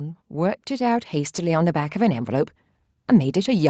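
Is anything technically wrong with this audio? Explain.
Yes. From 0.3 s to 2.5 s there is automatic gain rising. The gain control judged the incoming level too low and pushed its amplification up slowly, by about 6 dB over those two seconds or so, instead of holding it steady. The speech and the background noise therefore swell together, with the whole sound growing louder across that span. The ceiling near 8 kHz, consistent with an Opus call path, is normal for such a call.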